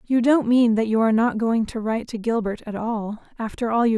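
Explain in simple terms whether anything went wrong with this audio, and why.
Nothing went wrong here: the speech recording holds steady throughout, with no technical problems to be heard anywhere in it.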